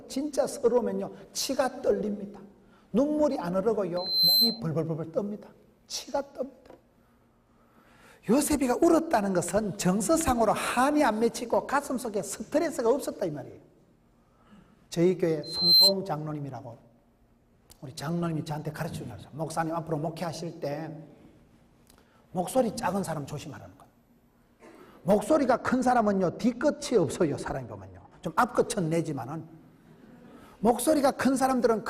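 At 3.97 to 4.60 s and again at 15.43 to 15.93 s, loudspeaker feedback squeal: a single 4.1 kHz tone swells over about a third of a second, rising a little above the sound and then clearly above it. Unlike a steady interfering tone, it builds on itself. From 25.19 to 28.26 s, de-emphasis applied wrongly leaves the audio dull, about 10 dB down at 10 kHz relative to 1 kHz, sloping gradually rather than stopping at a sharp low-pass cut-off.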